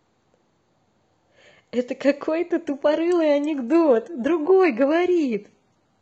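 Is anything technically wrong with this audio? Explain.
Yes. An adaptive stream drops to a lower bitrate at 2.67 s and stays there to the end: the connection slowed, so the player switched variants without a gap. The treble suddenly turns thin and synthetic, with watery codec artefacts, which fits a switch from roughly 96 kbit/s AAC to HE-AAC near 16 kbit/s.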